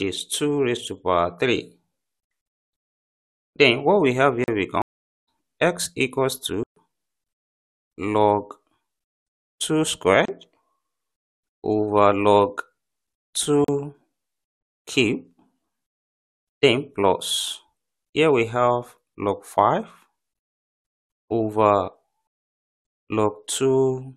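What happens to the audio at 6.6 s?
At 6.63 s the sound drops out abruptly into a hole of dead silence lasting about 131 ms, and it returns at 6.76 s. This is a block of digital silence: a run of samples was replaced by zeros, so the audio falls straight to nothing and comes back with no fade. At this length it is heard as a brief gap, not a single tick.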